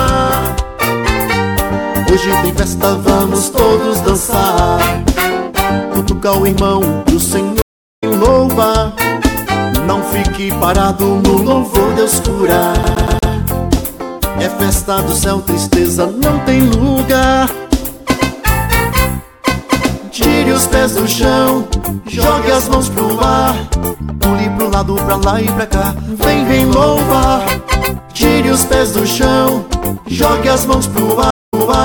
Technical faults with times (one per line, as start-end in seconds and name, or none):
7.62-8.04 stream reconnect
12.83-13.31 CD stuck on one turn
31.30-31.81 stream reconnect